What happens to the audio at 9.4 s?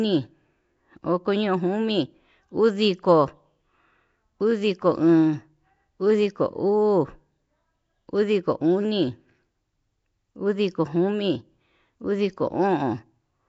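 At 9.4 s, as throughout the clip, the speech is smeared and underwater with a rough, hissy halo and nothing above 7.7 kHz, likely Nellymoser compression filling starved bands with noise rather than leaving MP3-style swirling gaps.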